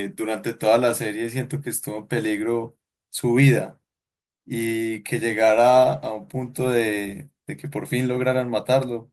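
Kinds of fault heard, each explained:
No technical faults detected anywhere in the speech.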